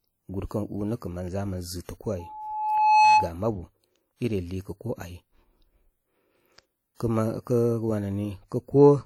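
Speech runs through a transform codec at a low bitrate, likely WMA at a rate that fits around 48 kbps. Its long blocks smear quantisation noise over tens of milliseconds and drop weak spectral lines, so the damage is plainly audible throughout as a ringing, washy quality with hiss that breathes with the speech. From 2.19 to 3.33 s, just before "ma bu i", a microphone picks up the loudspeaker it feeds, and the loop gain exceeds one at 856 Hz. That single loudspeaker feedback squeal builds over roughly 0.7 s until it sits around 10 dB above the speech. Between 6.95 and 7.00 s, a sharp attack falls late in a codec block, and noise sized for the loud onset fills the 52 ms before it. The result is pre-echo, a short hiss ahead of the attack that leaves it sounding soft and smeared.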